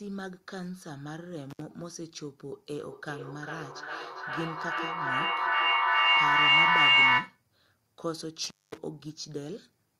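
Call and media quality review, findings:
Intermittent contact, twice: dropouts at 1.50 to 1.62 s (line open about 63 ms) and 8.44 to 8.78 s (open about 218 ms), crackle on both edges. Likely a loose cable or plug briefly breaking the connection, worth reseating.

Feedback echo between two devices, 2.74 to 7.43 s: speech comes back roughly every 0.4 s, getting thinner and ringier, and builds up instead of fading, peaking about 15 dB over the speech. Two devices on the call share a room, and one mic picks up the other's speaker.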